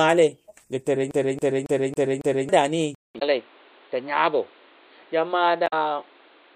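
From 1.11 to 2.49 s the CD is stuck on one turn. The same 0.28 s of sound repeats five times, with a brief mute at each jump.

At 2.95 s there is a 0.2 s silence. The sound then returns duller and quieter, with nothing above 4.6 kHz and new background noise about 30 dB below the speech. The input likely switched to a poorer device.

Damaged data in the compressed stream causes short blips from 3.16 to 3.23 s and from 5.64 to 5.73 s. Each time, the decoder loses sync.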